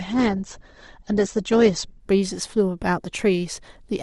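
From 0 to 2.0 s, an adaptive stream starting at a low bitrate leaves the speech dull, with a spectrogram cut off at 8.2 kHz, which fits roughly 16 kbit/s Opus, before full bandwidth abruptly returns.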